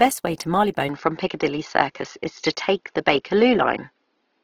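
From the start, the whole speech clip carries Opus compression damage, likely at a low rate around 16 kbps in its music mode. Bands keep their energy but are patched with noise. Tones sound grainy, rough and hissy rather than swirly.

At 0.89 s, right after "way to", the input switched to a poorer device, likely a lower-grade microphone or headset link. There is no gap at the change. The sound turns duller, with nothing above 6 kHz. The level shifts by about 5 dB, and a faint new noise floor appears underneath.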